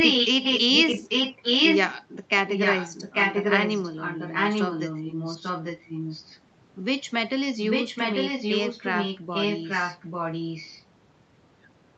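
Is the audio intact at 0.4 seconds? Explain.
No. From 0.0 to 2.0 s a delayed copy of the speech trails it by about 0.84 s, roughly as loud as or a little louder than the original. This is likely an echo leak: a loudspeaker's sound reached a microphone and the echo canceller let it through.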